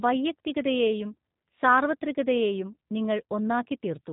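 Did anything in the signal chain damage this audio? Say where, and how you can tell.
Yes: the speech passed through a low-bitrate G.729 codec, probably around 8 kbit/s. It rebuilds each frame from a filter and sparse pulses, leaving rough, synthetic speech with nothing above 3.8 kHz throughout.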